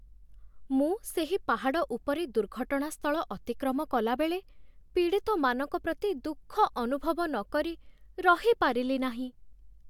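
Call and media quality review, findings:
No audible faults found.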